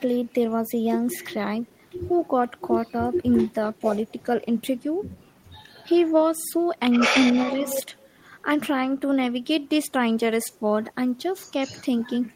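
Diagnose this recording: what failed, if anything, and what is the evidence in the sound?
The failure is echo with no canceller, at the call-processing stage. Throughout the speech, each phrase returns roughly 300 ms later, about 24 dB down, and thin: the far loudspeaker feeds its microphone uncancelled. A single delayed copy, rather than a smooth decay, rules out room reverberation.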